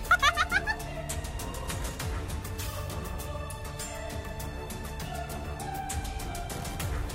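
No technical faults can be heard anywhere in the audio.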